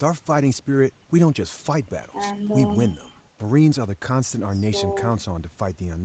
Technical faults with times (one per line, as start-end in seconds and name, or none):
none